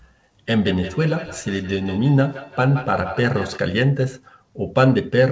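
From 0.63 to 3.62 s the speech returns as a thin, ringing repeat roughly every 150 ms, peaking about 13 dB below the direct sound. This is feedback echo between two devices: one device replays the other's microphone, which recaptures it beyond its own echo canceller.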